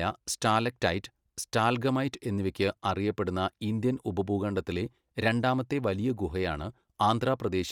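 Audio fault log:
Throughout, Bluetooth LC3 compression: plainly audible breathy, grainy edge, nothing above 20.3 kHz; likely LC3 transform coding, consistent with 48 kbps and 10 ms frames.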